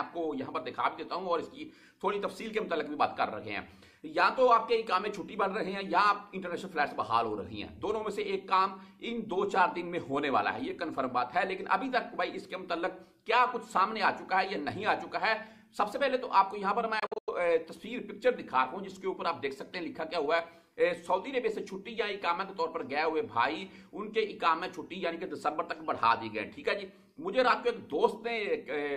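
At 16.99 s the sound breaks into several short silences until 17.30 s, likely a Bluetooth dropout: late packets were discarded, leaving gaps of up to about 93 ms.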